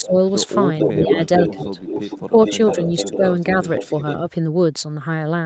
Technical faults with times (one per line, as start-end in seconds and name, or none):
0.00-0.14 speech suppressed in double talk
0.00-0.32 echo leak
0.79-3.17 echo leak
0.99-1.77 speech suppressed in double talk
2.17-2.50 speech suppressed in double talk
3.07-3.22 speech suppressed in double talk
3.69-4.16 echo leak